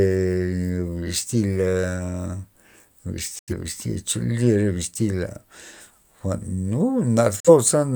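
Speech with two digital broadcast dropouts, at 3.39 to 3.53 s and 7.40 to 7.50 s. The receiver stops getting decodable frames and mutes with a fade of about 3 ms. The silences last about 85 ms and 43 ms, which fits two frames and one frame lost. Whatever was sent in those gaps is gone. On a waveform each appears as a flat line with abrupt edges, and on a spectrogram as a blank vertical band across all frequencies.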